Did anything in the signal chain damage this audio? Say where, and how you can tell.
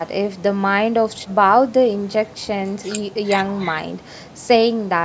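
No, nothing damaged this audio.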